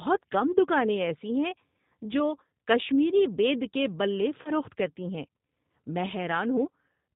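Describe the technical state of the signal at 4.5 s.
At 4.5 s the signal sits inside a stretch of VoIP packet loss concealed by the speech codec, running from 4.42 to 4.51 s. About 30 ms of audio, consistent with a single lost packet, never arrived, and the decoder filled the gap by extrapolating from the last pitch period and vocal tract filter while lowering the gain. The result is a stretched continuation, a buzzy tone or coloured noise, that fades. Recovery is gradual because each frame builds on the previous one.

Underneath, the whole recording carries plainly audible G.729 codec coloration, consistent with the G.729A variant at around 8 kbit/s. This codec rebuilds speech from a vocal tract filter, a pitch predictor and a few pulses per 5 ms subframe, and passes nothing above 4 kHz. At this moment that means a band-limited, slightly rough and synthetic texture, and the concealed segment makes it worse.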